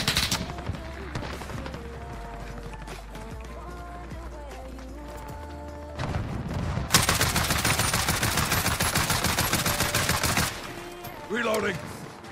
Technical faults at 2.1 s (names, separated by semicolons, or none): audio missing between chunks